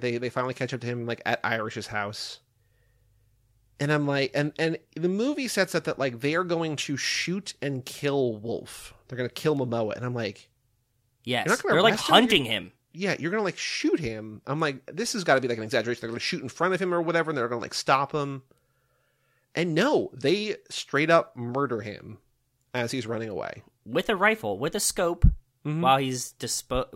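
Nothing in this speech recording stood out as a technical problem on listening.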